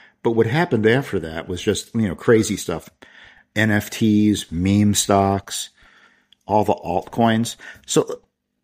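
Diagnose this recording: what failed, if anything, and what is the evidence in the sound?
Nothing failed, and nothing in the sound gives evidence of a fault at any stage of the recording.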